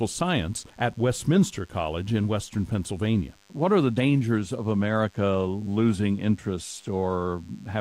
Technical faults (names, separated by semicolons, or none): DECT cordless phone buzz